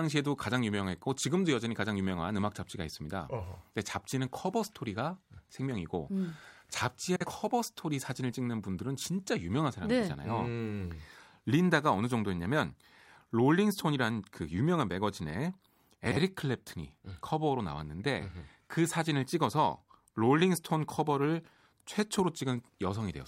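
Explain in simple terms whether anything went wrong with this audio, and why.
Something did go wrong, twice: at 7.15–7.26 s and 16.06–16.17 s the speech hits frames out of order. Two neighbouring 52 ms chunks got swapped, so each brief stretch plays back-to-front in halves, a garbled flutter.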